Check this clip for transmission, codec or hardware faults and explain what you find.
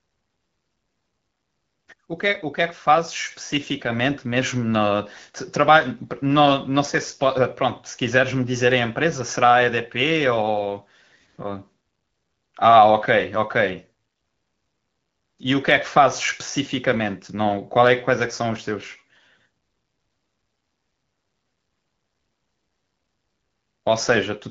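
No transmission, codec or hardware faults are audible.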